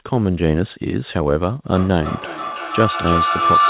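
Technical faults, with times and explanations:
1.7 to 3.7 s, feedback howl: a ringing tone near 1 kHz swells to about 5 dB above the speech and pulses roughly every 300 ms until the end. Two devices share a room, and each loudspeaker-to-microphone pass amplifies the loop's favoured frequency.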